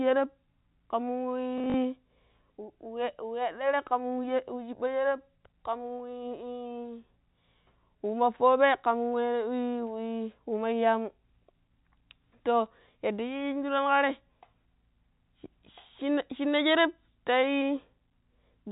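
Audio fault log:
1.58–1.74 s, packet loss with last packet repeated: across this 160 ms stretch about 80 ms of audio went missing in short gaps, the longest about 40 ms. Each gap was filled by replaying the preceding chunk, whose edges don't line up with the voice's pitch cycle, so the repeats form a brief robotic stutter with a buzz near 50 Hz, which fits 20 ms packets on this 4 kHz-limited G.711 telephone line.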